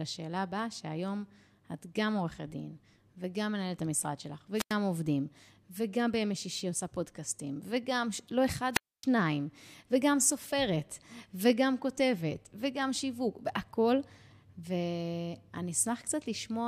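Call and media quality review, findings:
Wireless microphone squelch dropout, speech cut by brief hiss then near-silent holes, 4.55–4.74 s (mute about 91 ms) and 8.72–9.05 s (mute about 267 ms). Probable component: analogue FM mic link/receiver. RF signal fades, receiver squelch closes and mutes output.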